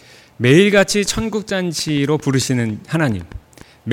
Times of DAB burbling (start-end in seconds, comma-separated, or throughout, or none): none